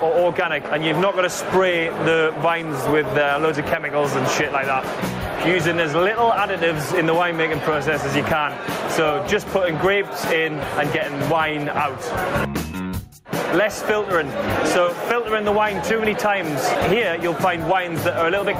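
Gain pumping runs throughout: the gain swings by roughly 15 dB under loud sounds, likely a fast limiter fighting excessive input gain, unlike a gate, which silences pauses.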